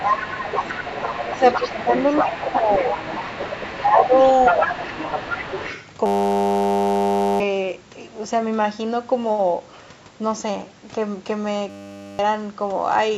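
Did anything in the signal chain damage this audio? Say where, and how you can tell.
Yes. Other side's voice leaking through occurs at the call-processing stage from 0 to 5.89 s. A second voice sits about 5 dB below the main speech. The likely cause is an echo canceller leaving loudspeaker playback in the microphone signal.

Speech suppressed in double talk shows up at 0.16–0.62, 1.32–1.43, 1.59–1.87, 2.42–2.83, 3.19–4.13 and 4.51–4.71 s. The main voice dips by about 5 to 10 dB. This likely comes from the echo canceller ducking both talkers during overlap.

A system hang loop appears at the driver or buffer stage, from 6.06 to 7.40 s and from 11.70 to 12.19 s. A 10 ms slice repeats exactly, giving a steady 100 Hz buzz. Roughly one and a half seconds, then half a second, of audio are lost.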